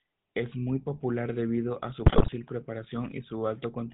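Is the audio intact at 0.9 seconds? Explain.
No, at 0.9 s the speech is carrying GSM full-rate codec damage that runs through the whole clip: a vocal-tract model excited by sparse regular pulses, bandlimited below 4 kHz, gives plainly audible buzzy, gravelly roughness, consistent with roughly 13 kbps coding.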